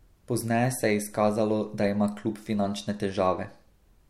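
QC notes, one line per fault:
No faults heard in this speech.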